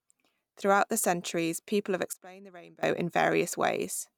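A sudden gain jump at 2.13 s, right after "the centuries people have", drops the speech and its background noise together by about 22 dB until 2.83 s, where the level snaps back. The likely cause is a digital gain change applied between adjacent samples with no ramp.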